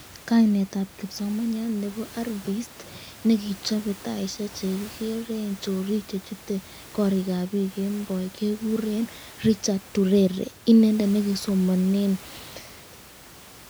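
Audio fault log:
No faults are heard in this speech clip. Room noise sits in the background, about 21 dB below the speech, and belongs to the recording itself.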